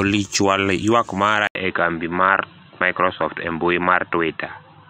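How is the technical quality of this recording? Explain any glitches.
The recording has one fault. From 1.47 s, after "chwal ywak mara", there is an 80 ms gap. Then the sound turns dull and boxy to the end, with nothing above 4 kHz. The level stays about the same, but a faint new noise floor appears. The input likely switched to a poorer device, such as a headset call profile, which passes a narrower band.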